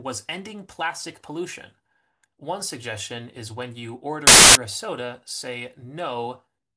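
From 4.27 to 4.55 s the speech gives way to very loud white noise: file tags played as audio, with an embedded cover picture's compressed data read as samples. Its abrupt edges and flat hiss, independent of speech level, distinguish it from clipping distortion.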